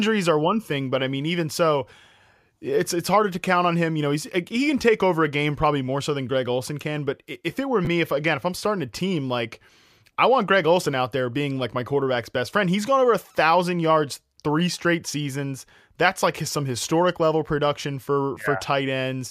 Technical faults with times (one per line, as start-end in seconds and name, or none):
7.85-7.87 chunks out of order